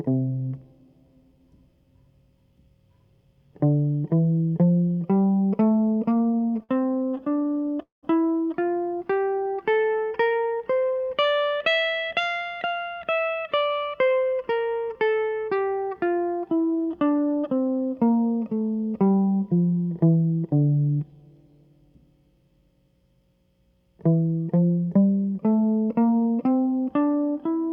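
Repeated stalls (stutter) run from 6.17 to 7.78 s. Packets kept reaching the receiver late, so its jitter buffer emptied 22 times in quick succession, and each time the last bit of music was stretched out to cover the wait. The longest fill is 50 ms, and together they add 281 ms, about 17% of that stretch. No music is lost, but the passage hitches and drags unevenly.

A call audio freeze follows at 7.82 to 8.05 s. The music stops and is filled for 202 ms: a brief continuation of the last sound that fades into 160 ms of silence, then the music resumes exactly where it left off. The likely cause is packets held up in transit long enough to drain the jitter buffer completely, so the playout delay grows by 202 ms and nothing is skipped.

A jitter buffer slow-down spans 8.95 to 9.70 s. With its reserve running low, the receiver repeated single pitch periods over and over to rebuild it, inserting 93 ms in total. 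The music plays at 89% of its proper speed while keeping its original pitch, so the tempo sags and held tones sound drawn out for those three-quarters of a second.

A jitter buffer speed-up occurs from 12.20 to 13.69 s. The buffer had accumulated more audio than its target, so the receiver cut out short pitch-period-sized pieces again and again, removing roughly 150 ms. Playback runs at 111% speed with the pitch unchanged, and the music sounds rushed, its steady pulse briefly pushed forward before normal timing returns.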